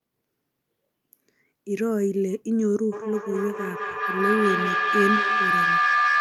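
From 2.92 s to the end, feedback howl: a microphone-loudspeaker loop gains level, building a tone near 1 kHz that rises about 2 dB above speech.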